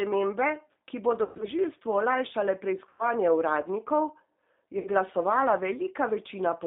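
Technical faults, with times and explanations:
Throughout, G.729 codec: the speech is intelligible but rough and faintly synthetic, and nothing reaches above about 3.7 kHz or below about 250 Hz. An 8 kbit/s coder rebuilds each 10 ms frame from a vocal tract filter, a pitch predictor and a few pulses, and the roughness is the result.
1.23 to 1.46 s, VoIP packet loss concealed by the speech codec: the speech smears into a buzzy, fading drone. About 140 ms of audio went missing in a spread of about 160 ms, with the longest gap about 120 ms. The decoder kept repeating its last pitch and filter at falling gain.
2.89 to 3.05 s, VoIP packet loss concealed by the speech codec: a shorter buzzy stretch that dies away. About 100 ms was lost, which fits five packets, and each rebuilt frame rests on the faulty one before it, so the sound stays weak after the gap.
4.79 to 4.88 s, VoIP packet loss concealed by the speech codec: a brief tonal smear fades out. 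About 60 ms was lost, which fits three packets. The decoder extrapolated the previous frame with falling gain until real packets arrived again.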